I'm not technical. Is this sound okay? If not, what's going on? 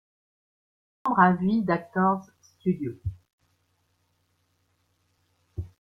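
No. The clip has a cut-off start: it sits in dead digital silence until about 1.06 s, then the speech jumps in mid-sound, with no natural build-up, because recording began late. Unlike a quiet pause or fade-in, the sound arrives abruptly, already underway.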